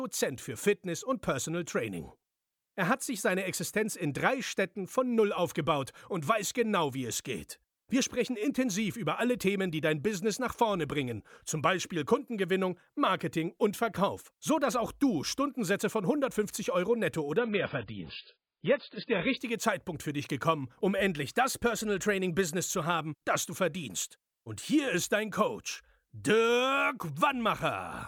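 Speech, where from 17.38 to 19.38 s an adaptive stream at a lower bitrate removes everything above 5 kHz and adds codec artefacts, switching in and out abruptly with no gap, unlike a dropout.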